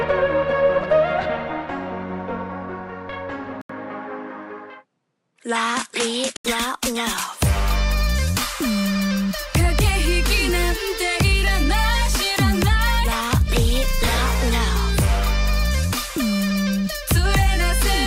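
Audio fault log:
3.61–6.45 s, input switched to a poorer device: after a silence of about 80 ms at 3.61 s, the sound loses everything above 11.4 kHz and turns duller, with a faint new noise floor roughly 50 dB under the signal, while loudness stays about the same. The likely cause is the system swapping to another microphone or a headset's call profile, whose narrower band and own noise take over until the original input returns at 6.45 s.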